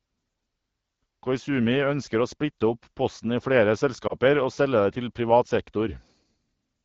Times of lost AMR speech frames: 4.07-4.14

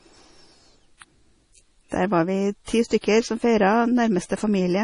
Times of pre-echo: 2.64-2.68, 3.01-3.04

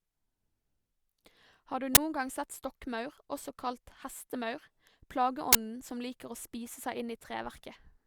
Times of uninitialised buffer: 1.95-1.97, 5.53-5.55

